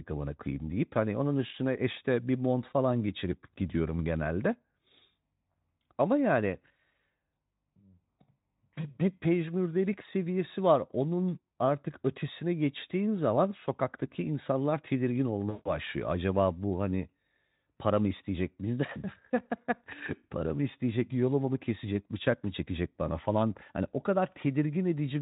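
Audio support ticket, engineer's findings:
VoIP packet loss concealed by the speech codec, 15.49–15.77 s, right after "zaman sokaktaki insanlar tedirgin". About 160 ms lost, which fits eight 20 ms frames dropped. The decoder stretches the last pitch and filter at falling gain into a buzzy or noisy, fading smear. The voice stays weak until its state recovers. Speex path (~18 kbps) shows faint codec damage at most.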